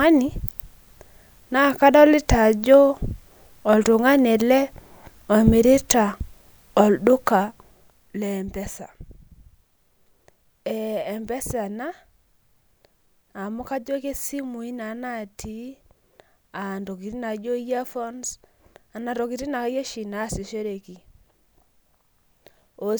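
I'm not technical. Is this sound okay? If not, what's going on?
No. Between 7.16 and 8.56 seconds the voice is turned down sharply in small jumps, about 50 per second, rather than in one smooth slide. Each jump makes a tiny click, and together they produce a ticking, buzzing rasp called zipper noise.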